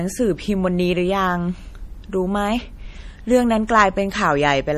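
From start to finish the speech has a watery, swirly quality, with chirpy s sounds and nothing above 15 kHz. That's likely MP3 compression at a low bitrate, something like 40 kbps, where the encoder chops the treble and lets faint frequency lines flicker on and off.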